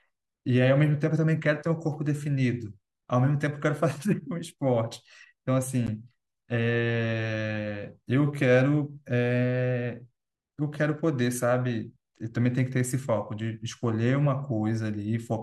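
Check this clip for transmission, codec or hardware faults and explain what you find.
One transmission fault appears in this speech clip. At 5.87 s, a gap between stream segments: mistimed segment boundaries leave roughly 14 ms of inserted silence, a hard-edged dropout showing as a flat waveform and a blank vertical stripe on the spectrogram.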